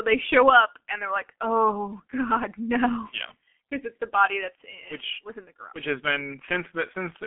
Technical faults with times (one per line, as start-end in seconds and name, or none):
0.00-7.26 G.723.1 codec